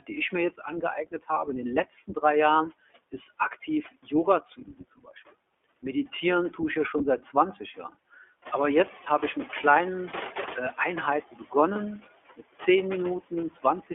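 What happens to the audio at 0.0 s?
Speech cut by the noise suppressor runs from 0.00 to 2.23 s. The suppressor mistakes parts of the speech for background and turns them down with it, by about 13 dB at the deepest. A few hundred milliseconds in total are affected, so soft consonants and word endings in this opening stretch sound swallowed or faint.

Noise suppressor artifacts are present here as well, as throughout. Frame by frame, the suppressor lowers bands it judges to be steady noise, cutting them by about 18 dB. The background therefore dips between phrases and returns underneath them.

The iLBC codec also shapes this moment. It is a narrowband VoIP codec running at 15.2 kbps on 20 ms frames, coding each frame's excitation independently. Only roughly 300 Hz to 3.4 kHz gets through, so the speech sounds boxed-in and telephone-like. The coding damage is plainly audible as a rough, somewhat synthetic texture.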